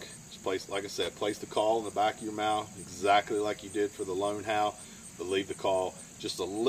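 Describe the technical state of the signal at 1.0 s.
At 1.0 s the signal is hit by loose connector crackle, running from about 0.95 to 1.13 s. A worn or dirty contact is making and breaking intermittently, chopping the audio and adding pops from any DC present, heard as an irregular burst of scratchy crackle.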